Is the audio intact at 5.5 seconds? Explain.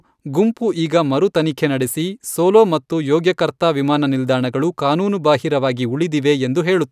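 Yes, the speech at 5.5 seconds is intact, with no audible fault at that moment.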